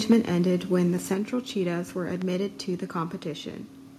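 From 0.10 to 0.14 s, just before "ended when the", microphone overload drives peaks about 4 dB past the converter's limit, likely from excessive input volume, leaving flat-topped waveform peaks and harsh crackle.

A microphone volume step-down follows at 0.13 s (about 2 dB) and again at 1.14 s after "ended when the" (about 5 dB), likely the call software cutting input gain, seen as abrupt envelope drops.

At 2.22–2.24 s, before "to the", a loud pop about 10 dB above the sound is likely an electrical transient. It shows as a single waveform spike and a full-band vertical spectrogram line.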